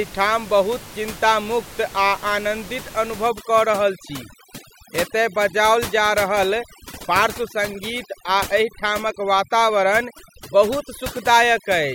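From 3.27 s to the end, overdone noise removal clamps the room noise, about 16 dB below the speech, down and breaks it into twinkling specks. A spectrogram shows isolated bins flickering on and off between gaps.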